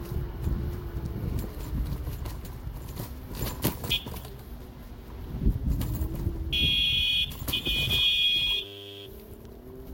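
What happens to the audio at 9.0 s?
At 9.0 s the audio is caught in a system hang loop running from 8.65 to 9.06 s. The output hardware kept replaying one 10 ms slice of its ring buffer while the system stalled, so that fragment repeats about 41 times and reads as a steady 100 Hz buzz. Roughly 400 ms of real sound is lost.

Underneath, the sound is swirly, smeared and hollow, with blurred attacks and nothing above 16.7 kHz. This is likely generation loss: repeated lossy re-encoding, pointing to about five Vorbis passes near 64 kbit/s, with quantisation noise and spectral holes compounding on each pass.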